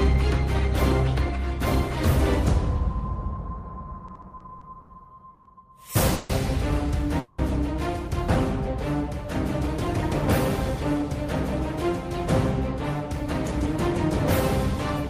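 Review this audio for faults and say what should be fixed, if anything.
From 4.07 to 4.90 s the audio drags and catches in a run of seven brief hitches, the longest about 70 ms, with the last sound smeared forward each time. These are repeated stalls (stutter): packets arrived late or too slowly, so the jitter buffer kept running dry and the receiver stretched what it had, filling about 170 ms, roughly a fifth of that stretch. Nothing is lost; playback just keeps waiting. A deeper or more adaptive jitter buffer would ride out this kind of uneven arrival.

Three call audio freezes follow, at 5.34 to 5.47 s (110 ms), 6.15 to 6.31 s (140 ms) and 7.19 to 7.40 s (190 ms). In each, the last sound hangs on as a held tone rather than dropping to silence, then the audio resumes exactly where it stopped, pushed later by the length of the hold. The likely cause is packets held up in transit long enough to empty the jitter buffer, with the receiver covering the wait. 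Smoothing out network delay spikes, for example by prioritising the call traffic, would prevent these freezes.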